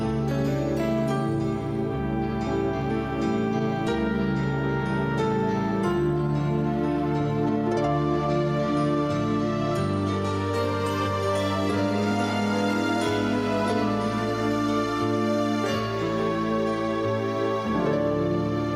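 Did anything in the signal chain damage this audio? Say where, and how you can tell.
No, nothing in the chain audibly damaged it.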